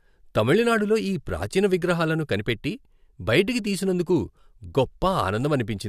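No technical faults can be heard anywhere in this recording.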